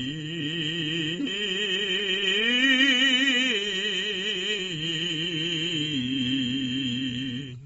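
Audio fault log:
Throughout: AAC compression. The music sounds dull and smeared, with nothing above about 7.6 kHz. Sustained tones carry a warbling, fizzy texture, and the high detail that remains sounds thin and patchy. This is likely lossy AAC-LC coding at a low rate, which fits around 24 kbps. With so few bits, the encoder drops the top of the spectrum. It also quantises the rest coarsely, leaving gaps that shift from frame to frame and cause the warble.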